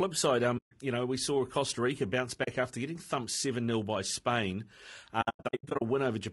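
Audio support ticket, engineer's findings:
Low-delay AAC compression, throughout: rough, grainy speech, noise between harmonics, lowered or synthetic top band. Likely AAC-ELD at a low bitrate, around 32 kbps; short frames resolve pitch poorly.

AAC frame loss with muting, 0.57–0.72 s before "you know we saw", 2.43–2.48 s before "after getting thumped seven": soft-edged silent holes. Lost frames zeroed, overlapping windows fade out/in.

AAC frame loss with muting, 5.21–5.82 s: scattered dropouts across about 600 ms, longest run roughly 100 ms. Same mechanism, repeated losses.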